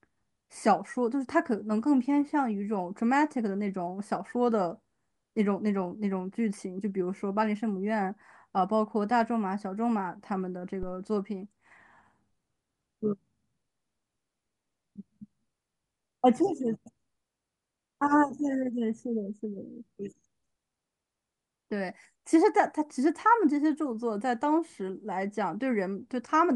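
Phantom power thump at 10.83–10.98 s: a supply switching on or off on the live input pushes a step through the coupling capacitors, giving a deep thump peaking about -26 dBFS, decaying within 34 ms.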